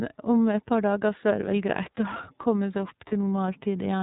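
From start to finish the speech carries the sound of the iLBC codec, and the damage is plainly audible. Nothing above 4 kHz gets through, so it's boxed into a narrowband telephone sound, and the voice has that slightly rough, synthetic edge from each frame's excitation being coded on its own. The roughness fits the 13.33 kbps mode with 30 ms frames.

Then at about 3.09 to 3.13 s there's a brief spot of lost iLBC frames. The gap lasts about 30 ms, which points to a single dropped 30 ms frame. The decoder filled it by repeating the last pitch cycle blended with noise, so you hear a short held, faintly buzzy vowel-like smear. Since iLBC frames don't depend on each other, the voice snaps back right after.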